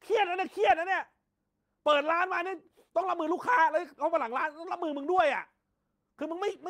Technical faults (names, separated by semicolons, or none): none